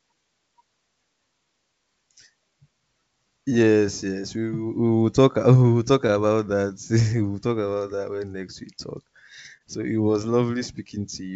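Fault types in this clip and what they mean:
Clock drift between sender and receiver: the sender's clock runs a touch slow, roughly one and a half percent, so the receiver's jitter buffer keeps draining and has to be topped up. You get small, unevenly spaced timing wobbles running through the speech.
Repeated timing corrections: from about 0.14 s to 8.76 s the receiver keeps stretching tiny slices to keep pace with the slow sender, playing at 98% speed and adding somewhere around 150 ms overall. It comes across as a slightly draggy, unsteady pace.
Short stall from a late packet: between 9.57 and 9.62 s a packet showed up late, the buffer ran dry, and the receiver held the last sound for 27 ms until it arrived. Nothing goes missing; you just hear one sound hang on a fraction too long.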